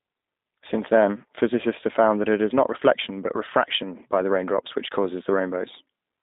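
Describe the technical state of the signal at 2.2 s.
Throughout, including 2.2 s, a G.729 codec rebuilds the speech from a vocal-tract model and sparse pulses, so it sounds plainly rough, synthetic and confined to 200 Hz–3.7 kHz.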